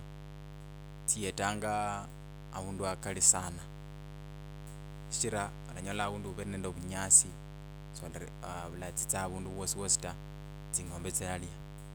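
Mains buzz runs from start to finish under the speech, fairly loud at about 10 dB below it. Sharp switching spikes enter twice per 50 Hz cycle, spraying harmonics up into the kilohertz range, so a steady, raspy buzz sits beneath every phrase.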